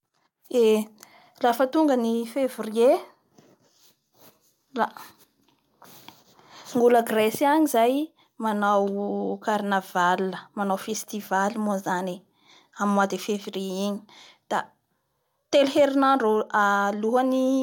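No technical faults can be heard anywhere in the recording.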